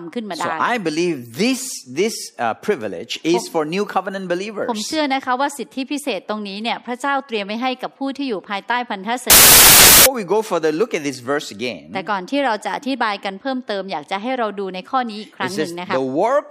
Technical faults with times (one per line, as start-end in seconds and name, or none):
9.30-10.06 samples built from the wrong bytes